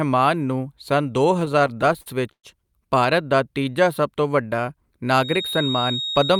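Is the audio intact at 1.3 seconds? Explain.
No. Just after "ਨੂੰ ਸੰਨ ਦੋ", from 1.33 to 2.45 s, packets arrive too slowly and the jitter buffer keeps running dry, causing repeated stalls (stutter). Fourteen gaps, up to 114 ms, are filled by continuing the last sound, so speech drags and stutters while nothing is lost.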